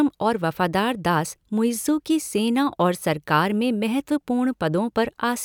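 No technical faults can be heard anywhere in the speech. Nothing in the recording calls for a timestamp or a fix.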